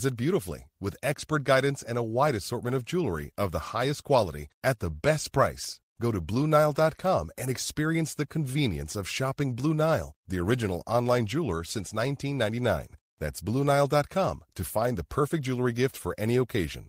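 Clock drift between sender and receiver runs through the whole speech recording. The sending side's clock runs roughly 5 percent fast, so audio arrives a little quicker than the receiver plays it out and its jitter buffer keeps filling. Unlike a simple playback-speed error, pitch does not rise: the voice keeps its natural register while the rhythm feels faintly pushed, because the fix comes from small discrete edits rather than a uniform resampling.

Those edits are the repeated timing corrections, heard from 0.15 s to 16.77 s, with the receiver keeping pace with a stream running at about 105 percent. To stop the buffer overflowing, it repeatedly discards short slivers of audio, always in the same direction and at uneven spacing. Each cut is brief, so it registers as a tiny hiccup or a slightly lurching tempo rather than a gap. That sets it apart from packet-loss dropouts, which leave audible holes or concealment smearing instead of seamless shortening.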